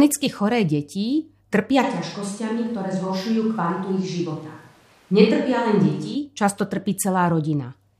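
A switch to a distant microphone runs from 1.84 to 6.14 s of this speech: after "choré deti trpia" the voice suddenly turns roomy and hollow, loses bass, drops about 5 dB and gains room noise, likely because the close microphone failed, until "často trpí".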